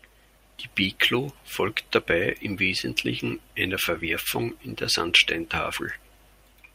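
Nothing here gives a listener anything to flag, since the speech carries on without a single technical fault from the first moment to the last.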